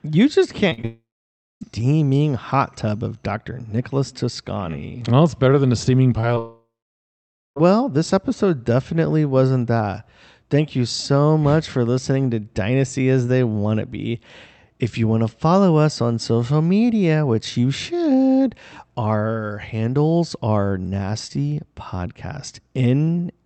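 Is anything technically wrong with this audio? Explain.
Yes, the audio has two kinds of fault, heard through a call path whose coding cuts the highs at about 8 kHz, which fits Opus at around 48 kbps.

Short concealed packet loss: brief smears or wobbles at 0.69–0.73, 0.73–0.80 and 0.82–0.85 s, then at 6.21–6.25 and 6.35–6.38 s, after "better than a steaming". Roughly 20 to 40 ms of audio missed the decoder each time, so the receiver extended the preceding sound and blended back.

Long network dropout: a fading buzz or hiss that gives way to silence, from 0.85 to 1.63 s and from 6.38 to 7.58 s, resuming at "this episode definitely wasn't". The likely cause is that no audio arrived for these stretches. The receiver continued the last sound until it died out, and the lost portion never plays.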